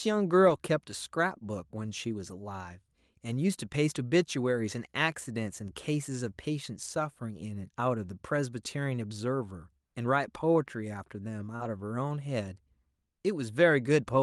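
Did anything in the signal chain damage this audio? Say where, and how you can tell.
Yes. Network packet loss on the Opus call path, in two forms.

Lost packet rebuilt from error correction: at 0.45–0.55 s, 0.61–0.64 s, 2.30 s and 11.60–11.66 s the sound turns briefly rougher and noisier without any break. The next packet's low-bitrate backup copy was decoded in place of the missing one. Continuity distinguishes this from concealment.

Short concealed packet loss: at 0.57–0.61 s and 11.56–11.62 s there is a brief smear or wobble. No data arrived, so the decoder extended the preceding sound for 14 ms and 34 ms before blending back. Invented continuation, not degraded real content, separates it from error-correction rebuilds.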